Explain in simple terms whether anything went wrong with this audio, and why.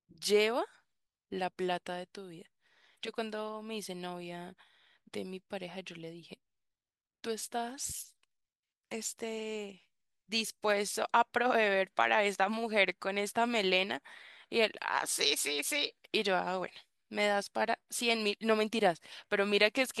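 At 15.67 s there is a brief click from a repeated buffer: new audio arrived late, so the device replayed the last 5 ms piece once.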